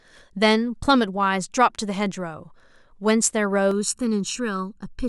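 From 3.71 s to the end at 5.08 s, the speech turns hollow and phasey: channel delay (comb filtering). One channel lags the other by under a millisecond, so mono summing cuts evenly spaced notches starting near 700 Hz. Unlike flanging, these notches stay fixed rather than sweeping.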